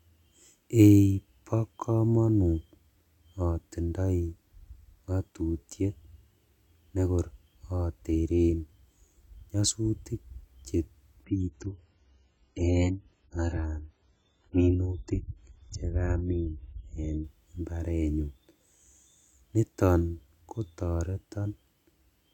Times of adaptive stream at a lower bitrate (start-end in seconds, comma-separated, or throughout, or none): 11.24-17.24